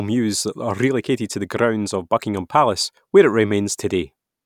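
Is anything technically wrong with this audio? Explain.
No, nothing technically wrong turns up here; this speech recording comes through without any audible problems.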